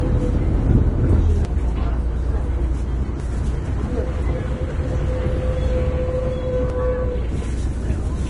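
Low-bitrate audio saved at a high bitrate, throughout: nothing is present above 10.6 kHz, and the dull, smeared detail of a heavy first encoding persists. This likely comes from a low-bitrate Vorbis file re-encoded as a high-bitrate MP3, which cannot restore what was already discarded.

Audio missing between chunks, at 1.45, 3.2, 4.95 and 6.7 s: the sound jumps forward every 1.75 s. About a third of a second vanishes at each boundary, consistent with a processor that drops a piece between two-second chunks and butts the remaining edges together.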